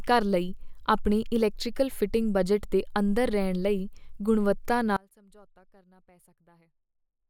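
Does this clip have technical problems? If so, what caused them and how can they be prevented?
Yes. An audio dropout to a faint residue starts abruptly at 4.97 s, after "ਲਈ ਗੁਣਵੱਤਾ", and lasts to the end. The speech is replaced by a faint residue roughly 30 dB down, likely from a broken signal connection while the input stayed live. The waveform shrinks suddenly to a thin band, and the spectrogram drops to a dim wash. Secure cables and connectors, and monitor the feed live.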